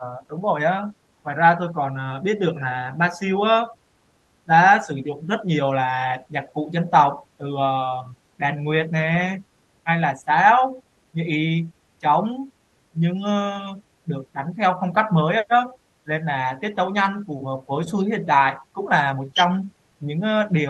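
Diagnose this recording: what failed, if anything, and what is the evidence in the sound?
Call processing failed: speech suppressed in double talk. The speech repeatedly dips by up to about 15 dB at 0.0–3.73, 4.45–7.46, 8.03–8.94, 9.84–11.27, 11.99–13.22 and 13.76–20.7 s. This is likely an echo canceller mistaking near-end speech for echo while far-end talk overlapped, and attenuating the near-end speech.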